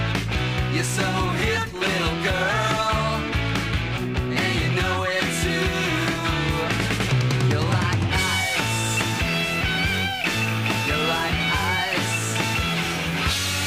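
From 1.62 s to 13.62 s, periodic USB or driver dropouts occur every 2.0 s, about seven in all. At each of these points something on the system stalls the USB bus or the audio driver, and the stream loses around a millisecond of audio, which is replaced by silence. Each gap is too short to hear as a pause. Instead it cuts the waveform abruptly, so it sounds as a small tick or pop, evenly spaced like a clock, and only audible where the sound is present.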